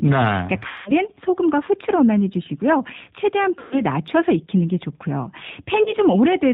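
Speech carried over a G.729 codec, the 8 kbit/s VoIP coder, with plainly audible damage throughout. Nothing above 4 kHz survives, and the voice has a rough, synthetic edge because it is rebuilt from a vocal tract filter, a pitch predictor and a few pulses per frame. A plain low-pass filter would only dull the top end. This codec adds grain and a modelled, buzzy quality.

VoIP packet loss concealed by the speech codec occurs three times. At 0.68 to 0.93 s about 180 ms of audio is missing, which fits six lost packets. At 3.59 to 3.81 s 120 ms is missing, and at 5.83 to 5.94 s 30 ms is missing. The decoder fills each gap by repeating its last pitch and filter at falling gain, so the sound smears into a fading buzzy tone or coloured noise and stays weak or distorted for a while after packets resume. A simple dropout would give silence or a click instead.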